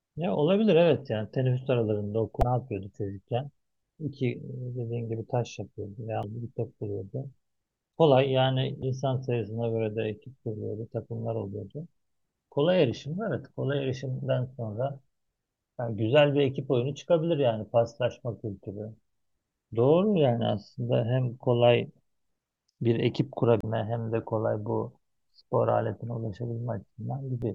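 Damaged data in the compressed speech stream makes the decoder lose frame sync, producing brief glitches of about 40 ms at 2.39, 6.21, 8.80, 23.61 and 27.40 seconds.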